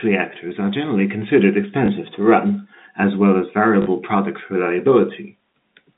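At 1.86 to 1.88 s there is packet loss with the last packet repeated. About 20 ms of sound drops out, which fits a single 20 ms packet. The receiver plays the previous packet again to fill it. At 3.82 to 3.86 s it happens again, over 40 ms. The repeat runs twice here and buzzes at 50 Hz, a brief robotic stutter over the band-limited telephone sound.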